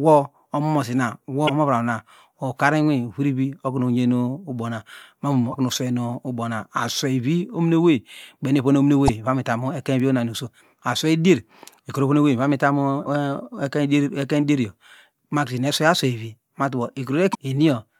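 Short chirps, squawks, clicks or brief holes cut through the speech at 1.45–1.50 s, 5.50–5.54 s, 9.08 s, 13.02–13.07 s and 17.31–17.35 s, each lasting no more than about 45 ms. These blips are damaged data in the compressed stream: bytes in the encoded file were lost or overwritten, so the decoder misreads those frames, loses its place and hunts for the next valid frame header before clean decoding resumes.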